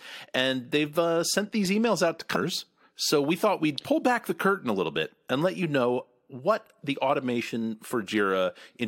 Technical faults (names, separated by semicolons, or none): compressed frames skipped